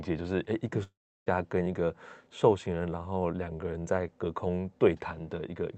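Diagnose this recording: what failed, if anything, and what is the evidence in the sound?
At the network stage, the sound fails from 0.83 to 1.28 s, most likely a long network dropout. About 0.44 s of audio never arrives, and the receiver fills the gap with a buzzy continuation of the last sound that fades. On a waveform, the tone tapers into flat silence lasting about 0.34 s. On a spectrogram, smeared harmonics fade to an empty band, and the audio resumes with the lost part skipped. The spectrogram also shows the call codec's cut-off at 8 kHz.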